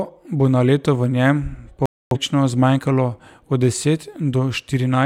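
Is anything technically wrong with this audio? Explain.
Yes, a digital broadcast dropout at 1.86–2.17 s, just after "na leto v njem": the receiver lost frames, likely about six, and muted, so the speech simply drops out.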